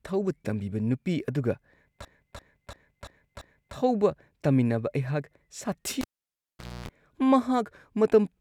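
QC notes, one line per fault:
2.05–3.76 s, system hang loop: one 341 ms slice of speech repeats five times at 2.9 Hz. This machine-gun stutter fits a 16384-sample buffer.
6.01–6.89 s, cable pulled and plugged in: pop, then about 0.82 s of near silence, 0.27 s of 60 Hz mains buzz, and a second pop on reconnection.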